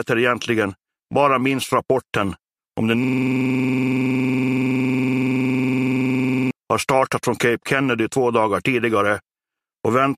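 From 3.04 s to 6.51 s the audio falls into a system hang loop: a 46.44 ms segment repeats about 75 times, producing a buzzy stutter at 21.5 Hz. The hardware kept replaying one ring buffer while the system stalled, which fits a 2048-sample buffer.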